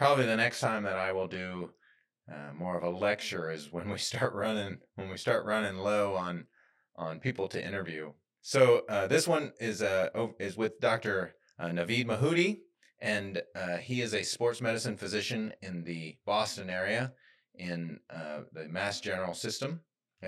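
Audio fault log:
Throughout: channel delay (comb filtering). One channel lags the other by roughly 20 ms, and summing them cancels evenly spaced frequencies from around 20 Hz upward, making the speech sound rough or slightly doubled. The notches stay fixed, unlike a sweeping flanger, and no distinct echo is heard.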